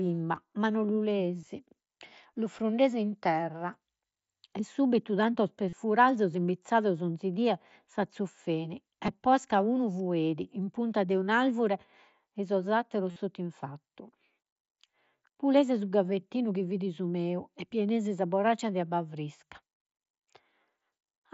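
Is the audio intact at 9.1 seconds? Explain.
No. At 9.06 s, concealed Bluetooth headset packet loss fills a 15 ms gap, likely two dropped packets, by repeating recent waveform; a waveform shows a brief copied cycle, and a spectrogram shows a buzzy seam.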